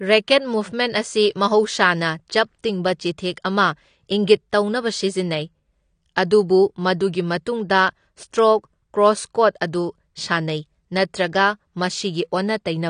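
AAC compression throughout: the speech is dull and smeared with nothing above 9.7 kHz, likely from AAC-LC coding discarding detail at a bitrate consistent with 32 kbps.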